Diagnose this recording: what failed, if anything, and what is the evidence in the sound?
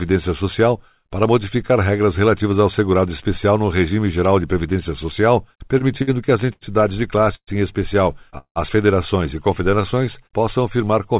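Between 5.57 and 7.50 s, right after "geral de previdência social", the network and jitter-buffer stage suffered repeated stalls (stutter). The buffer ran dry ten times and about 344 ms was filled with continued sound, the longest gap 122 ms. On a waveform, short frozen stretches of repeated cycles interrupt the envelope.

A call audio freeze sits at 8.38–8.59 s, between "em especial" and "federações e". The receiver continued the last sound for 177 ms, fading to about 80 ms of silence, likely because a packet delay spike emptied the jitter buffer. On a spectrogram this appears as a smeared tail ending in a blank column within the sub-4 kHz band.

From 9.71 to 10.39 s, after "federações e", the buffer applied a jitter buffer slow-down, repeating pitch periods to add 81 ms and play at 89% speed. On a spectrogram the harmonics stretch horizontally while their spacing stays the same, so pitch is unchanged and the sound drags.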